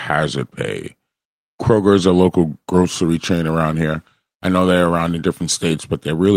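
Nothing in the speech here points to a technical fault, so there's really nothing to flag.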